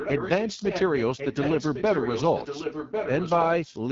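Throughout, the speech sounds rough and raspy, with nothing above about 7.6 kHz. This is AMR wideband (HD Voice) codec damage. The coarse pulse modelling fits AMR-WB at 8.85 kbit/s, one of its two lowest rates, where voices lose smoothness.

From 0.0 to 3.8 s, a delayed copy of the speech trails the original by about 1.1 s, only a few decibels quieter. This is an echo leak, likely caused by a loudspeaker-side echo canceller failing to remove its microphone pickup.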